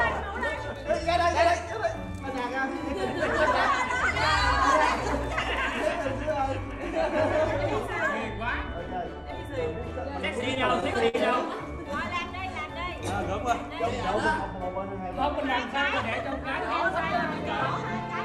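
Between 10.41 and 11.16 s come repeated stalls (stutter): the jitter buffer ran dry six times, and each wait was filled by stretching the last sound, the longest 52 ms. Nothing is lost, but the audio hitches and drags. A spectrogram shows brief frozen bands, and the waveform short fading plateaus.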